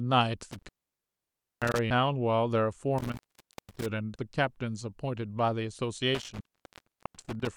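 From 0.52 to 1.79 s the speech drops out through intermittent contact, a loose connection opening for about 0.93 s. Crackle marks each edge and only faint hiss remains in the gap. The same happens from 2.98 to 3.86 s, open for about 0.51 s, and from 6.15 to 7.47 s, open for about 0.92 s. The hiss-filled gaps set these apart from clean skips.

At 4.15 s and 6.40 s there are abrupt jumps with no gap at all. Roughly a third of a second is gone each time, most likely audio missing between chunks as a 2.5 s processing block closed. The seamless join separates these from the contact dropouts.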